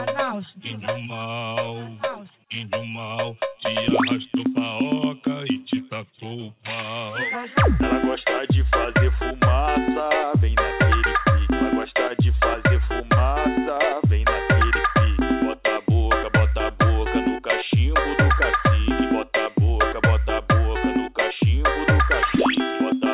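Nothing stood out on listening, and the audio simply carries the narrow telephone-band character of its call path, with nothing above 4 kHz.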